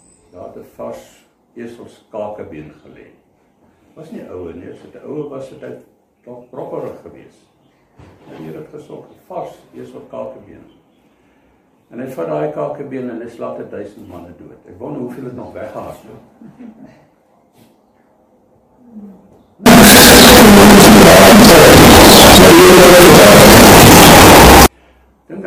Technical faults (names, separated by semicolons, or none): signed and unsigned mixed up